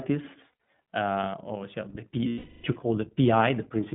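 Throughout, the speech sounds narrow, slightly rough and synthetic, with plainly audible coding damage. Nothing passes below about 150 Hz or above 3.5 kHz. This is the iLBC codec, which codes each short frame independently. The sound fits 20 ms frames at around 15 kbps.

From 0.52 to 0.68 s, just before "uh or the", brief buzzy, held-vowel patches flicker through the speech, each only a few tens of milliseconds long. From 2.28 to 2.66 s, just before "you call", one longer breathy, buzzy drone fades away. Both are lost iLBC frames. The decoder fills each gap by repeating the last pitch cycle mixed with noise. About 100 ms is missing in the first stretch and 360 ms in the second, and the voice is right again almost at once.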